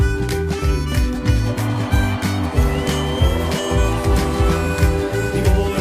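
No technical faults can be heard anywhere in the clip. Nothing in the sound needs a timestamp or a closer listen.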